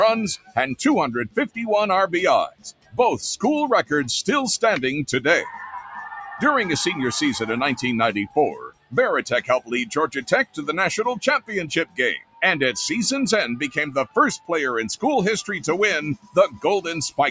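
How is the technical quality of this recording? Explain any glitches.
The recording is compromised by a speech-oriented noise suppressor throughout and eight deeper dropouts it causes. The call microphone processing limits the top end to 8 kHz.

Noise suppressor applied to music or sounds, throughout: a suppressor built for speech treats sustained and ambient material as noise and pulls it down, so the level swings by around 10 dB. Onsets pass while held sounds and tails sink, giving a pumping, thinning quality.

Sound cut by the noise suppressor, at 0.37–0.57, 1.28–1.57, 2.5–2.99, 8.63–8.95, 9.88–10.29, 10.45–10.63, 12.19–12.42 and 16.16–16.64 s: here it misjudged the sound as noise and attenuated it hard, by about 15 to 21 dB. Each dip lasts a few tenths of a second, heard as sudden sinking or truncated decays.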